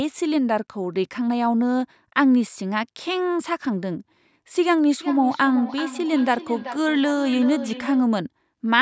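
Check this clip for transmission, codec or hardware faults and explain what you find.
One fault appears: a feedback echo between two devices, from 5.01 s to 8.12 s. The speech returns as a ringing copy roughly every 0.4 s, peaking about 12 dB below the direct sound. A second device in the room replays the call, and this microphone picks that playback up again. Its echo canceller only removes what its own device plays, so the copy goes back out. The sound, which stops at 8 kHz through the call microphone processing, carries these repeats throughout that stretch.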